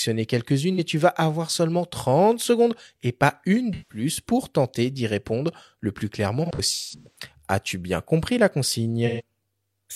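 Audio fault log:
0.74–0.79 s, 3.73–4.04 s, 6.45–7.19 s, 9.06–9.21 s: AAC frame loss with concealment. Brief smeared, noisy, phasey patches replace the sound. These last about 43 ms at 0.74 s, 171 ms just before "pour tenter d'y répondre" and 128 ms after "bien compris la". After "répondre le plus clairement", 341 ms of dropouts are scattered over 597 ms, the longest about 150 ms. The decoder lost AAC frames, the first gap fitting a single one, and rebuilt each from the last good spectrum.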